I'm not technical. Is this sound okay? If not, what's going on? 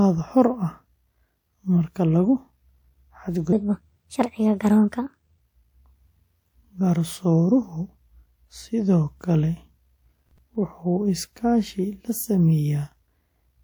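No. From 3.53 to 5.40 s there is a section at the wrong speed. The speech runs about 1.34 times too fast, so it sounds hurried and roughly five semitones higher. This is likely from being played back against the wrong clock.

From 10.19 to 10.55 s there is processor overload crackle, a short gritty tearing over the speech. The computer fell behind several times in a row, about seven, and each time it replayed a sliver of old audio, which points to chunks of around 10 ms.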